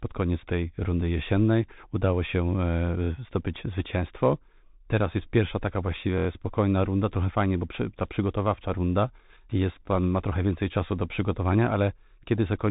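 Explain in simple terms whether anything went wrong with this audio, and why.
Yes, two things went wrong. The audio travelled through a Bluetooth headset link using the Bluetooth CVSD headset codec, a basic phone-quality format. It keeps nothing above about 3.8 kHz, so the speech sounds muffled and narrow throughout, with scratchy s sounds and a grainy hiss underneath.

At 6.18 to 6.27 s, just after "jest pierwsza taka" and before "spokojna runda trochę fajnie", new audio arrived late, so the device replayed its last tiny chunk. That repeated buffer plays the same sliver about five times in a row, heard as a quick buzzing stutter.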